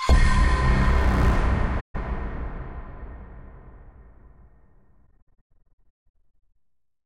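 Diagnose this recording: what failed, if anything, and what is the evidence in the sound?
AAC frame loss with muting, at the codec stage: the sound fades to silence from 1.80 to 1.96 s, then in scattered gaps between 5.07 and 6.56 s totalling about 0.92 s, the longest roughly 150 ms. A spectrogram shows blank full-band columns. The waveform shows tapered edges, because the decoder zeroed the lost frames and the overlapping windows smoothed the fades.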